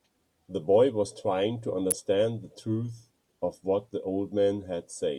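At 1.91 s a sharp snap cuts across the speech. It peaks around -5 dBFS. This is an electrical switching spike. A nearby switch or motor likely arced, and the audio line picked up the burst as a brief click.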